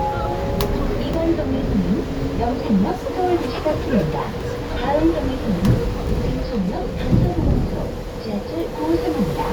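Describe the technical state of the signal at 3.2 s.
At 3.2 s the everyday sound carries through intact, with no audible fault at that moment.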